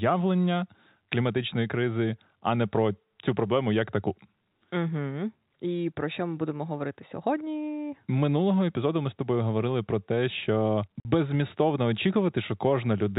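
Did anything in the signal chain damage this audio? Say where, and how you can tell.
Yes. The damage happens at the network stage: packet loss filled with silence at 11.0 s, right after "говорили про те що". The speech drops out completely for 50 ms and resumes abruptly at hard edges. That gap fits several consecutive packets of about 10 ms each going missing, with the receiver inserting silence in their place. On the waveform it shows as a flat line with square edges. On a spectrogram it appears as a blank vertical band. The G.711 telephone coding is also audible in the band limit at 4 kHz.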